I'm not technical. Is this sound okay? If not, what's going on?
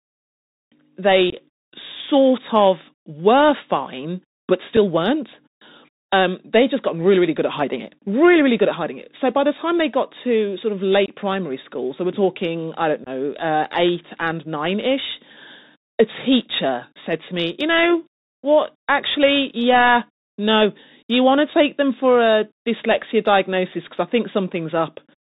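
No. Bluetooth CVSD headset codec damage runs through the whole clip: the speech sounds as if it came through an old-style Bluetooth headset. That link sends sound one tiny up-or-down step at a time and cuts off everything above 4 kHz. The speech sounds muffled and phone-like, loud sharp sounds get rough where the steps can't keep up, s sounds turn scratchy, and a grainy hiss sits underneath.

Unconcealed Bluetooth headset packet loss occurs at 1.30 to 1.35 s, 4.77 s, 11.06 to 11.09 s and 13.04 to 13.09 s. Small chunks of sound went missing between the headset and the phone, and nothing covered the gaps. The speech drops out abruptly for a split second and can click at the edges, then returns briefly quieter. The longer gaps point to several chunks lost in a row, and the one at 4.77 s to just one.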